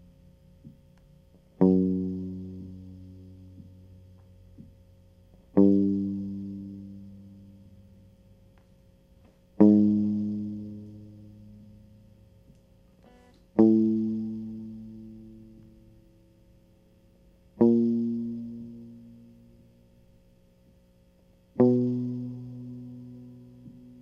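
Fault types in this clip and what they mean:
No technical faults can be heard anywhere in the music, with the signal holding steady and intact throughout.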